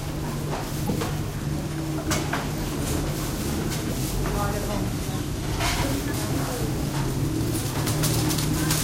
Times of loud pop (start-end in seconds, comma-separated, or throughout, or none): none